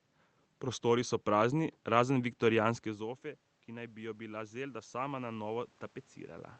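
From 2.99 s to 5.74 s, automatic gain rising: after the level drops about 15 dB as the talker moves back near 3.0 s, the gain control slowly adds about 6 dB, lifting voice and room noise alike. The waveform envelope ramps up, and a spectrogram shows the noise floor brightening with the speech.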